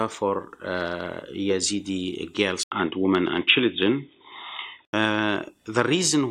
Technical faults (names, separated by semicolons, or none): input switched to a poorer device